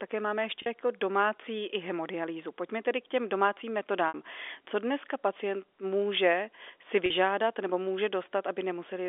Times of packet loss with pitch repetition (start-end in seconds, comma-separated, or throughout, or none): 0.62-0.66, 4.08-4.14, 7.06-7.10